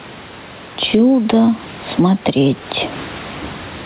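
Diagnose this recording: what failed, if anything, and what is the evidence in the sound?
Gain pumping from start to finish: the gain swings by around ten decibels, pulling down under each loud bit of speech. That's call processing, likely input gain set far too high with a fast limiter clamping every peak, squashing the level range.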